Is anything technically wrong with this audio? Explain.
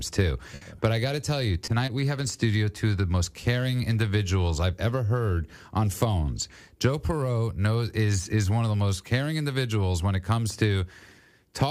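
Yes, there are two kinds of network trouble near the start.

From 0.55 to 0.67 s there's a short stall from a late packet, twice back to back. The jitter buffer ran dry, so the receiver stretched the last sound, about 60 ms and then 20 ms, and resumed from the same point. Nothing's lost, but that sound hangs on too long with a buzz or dip.

At 1.66–1.70 s and 1.86–1.90 s you get short concealed packet loss. About 20 ms of audio never arrived each time, so the decoder extended the preceding sound to cover the gap and blended back into the real signal. Each one comes across as a brief smear or wobble.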